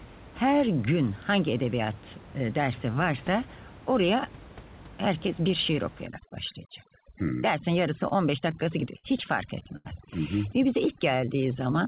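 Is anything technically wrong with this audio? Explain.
Yes, several faults affect the second half of this speech clip, which comes through a narrowband call path with nothing above 4 kHz, consistent with G.711 mu-law.

From 6.06 s, right after "herkes bir şiir", to the end, the room noise, which sat about 20 dB below the speech, collapses into near silence scattered with twinkling specks. This is overdone noise removal. The suppressor was set too aggressively, so any frequency band that came close to its noise estimate was pushed far down or switched off. The quieter parts of the speech fell under that threshold and were stripped out along with the noise.

At 8.08 s and again at 9.77 s, a sound hangs on for a moment too long, with a faint buzz or dip before the speech carries on. The first hold lasts about 27 ms and the second about 82 ms. Each is a short stall from a late packet. The jitter buffer emptied, so the receiver stretched the last sound until the packet arrived, then resumed at the same point. 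Nothing is lost, but the added delay grew by the length of each fill.

Between 8.51 and 9.06 s, the speech drags and stutters through four small hitches. Together they fill about 86 ms, roughly 15% of that stretch, and the longest is 54 ms. These are repeated stalls. Packets kept arriving late, so the buffer ran dry over and over, and each time the receiver extended the last sound until it could continue. No speech is missing, but the flow is broken up.

From 10.87 to 11.77 s, the speech slows to about 93% of normal speed while keeping the same pitch, so sounds feel drawn out. This is a jitter buffer slow-down. To rebuild its reserve, the receiver repeated single pitch periods and fragments of pauses many times in a row. This added about 72 ms of audio without raising or lowering the pitch.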